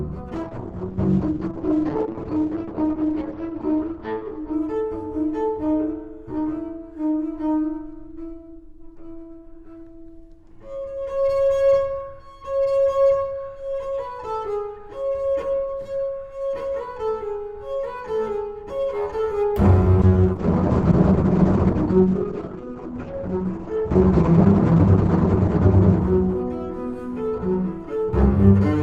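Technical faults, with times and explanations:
0.37–6.59 s and 20.02–28.47 s, call bitrate drop: the sound turns rough and muffled as high frequencies are cut off above 6 kHz, then 8 kHz. It is worst for 2.9 s and 5.1 s, which fits the encoder falling from around 96 kbps to 8–9 kbps.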